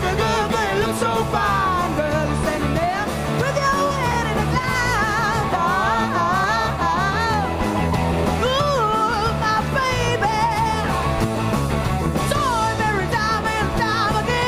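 A regular click recurs every 0.9 s from 0.13 s to 13.65 s, about fifteen in all, heard as small pops whenever signal is present. On a spectrogram these appear as evenly spaced thin vertical broadband lines; in the waveform each is a tiny step or discontinuity where a handful of samples vanish or repeat. The likely cause is clock drift buffer slips, with two devices' clocks disagreeing by something like a couple of hundred parts per million.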